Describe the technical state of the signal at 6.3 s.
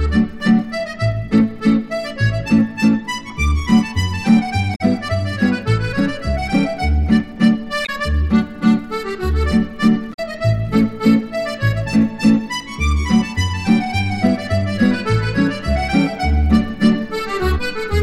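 At 6.3 s the signal is intact, with no audible dropout, distortion, click or other fault at that point.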